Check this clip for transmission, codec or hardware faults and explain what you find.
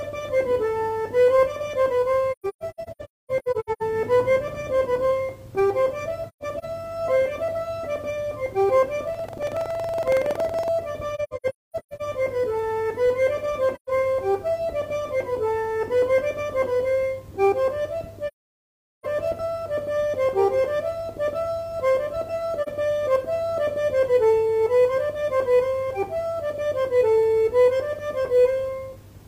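Two faults are present. AAC frame loss with muting occurs at 2.31–3.82, 6.28–6.65, 11.15–12.02, 13.75–13.90, 18.27–19.06 and 22.62–22.68 s. Lost frames are decoded as silence, and the overlapping windows fade the sound out and back in, leaving soft-edged gaps. Buffer tearing occurs from 9.10 to 10.72 s. Writer and reader cross inside each period, splicing in a small slice of audio about a tenth of a second old. This produces a 21.5 Hz rattle, which fits a 2048-sample buffer.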